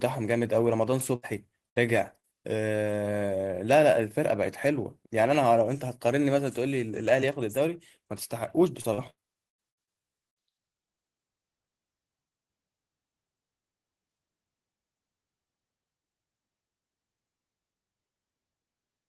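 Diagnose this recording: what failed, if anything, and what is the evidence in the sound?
The network path failed. The first fault is a burst of packet loss at 1.15 to 1.25 s and again at 1.69 to 1.78 s, each removing about 80 ms of speech. The receiver extended the last sound for roughly 70 to 75 ms while fading it, then jumped ahead. On a spectrogram, frozen horizontal harmonics thin out into a decaying smear before the speech restarts abruptly; the waveform shows a repeating, shrinking cycle.

A short concealed packet loss follows at 2.20 to 2.25 s, where about 40 ms never arrived in time. The concealment filled roughly 34 ms by continuing the preceding sound and then crossfading back into real audio, so it is heard as a brief smear or wobble rather than a silence. A spectrogram shows a narrow patch of slightly blurred, overly regular energy; in the waveform a few periodic cycles stand where natural variation should be.

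From 8.81 to 10.38 s there is repeated packet loss with a robotic sound. Ten separate gaps removed about 420 ms in total, the longest about 99 ms, and about 27% of the stretch is patched audio. Each patch repeats the last fragment before the next loss arrives, giving choppy speech. On a spectrogram the stretch looks striped, with recurring blocks of smeared, frozen harmonics; the waveform shows periodic looped segments interrupting the speech envelope.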